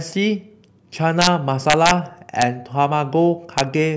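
Integer overflow cracks the speech at 1.22–1.27 s, 1.70–1.91 s, 2.42 s and 3.58–3.61 s. Peaks only about 1–2 dB over full scale wrap to the opposite sign, showing as sudden full-height waveform flips and broadband vertical spectrogram streaks.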